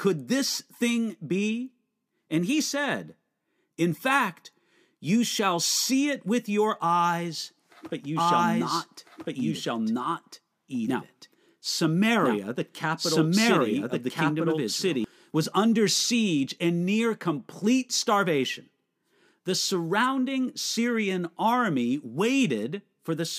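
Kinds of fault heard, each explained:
Doubled audio track: A second, slower capture path or an out-of-step edit likely mixed the speech in twice. From 8.16 s to 15.04 s a full-band copy trails about one and a half seconds behind at roughly equal loudness, with no decay, starting and stopping abruptly.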